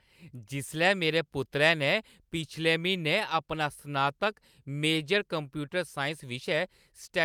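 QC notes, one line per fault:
No technical faults are present in the signal, which carries the speech with no dropouts, distortion or interruptions.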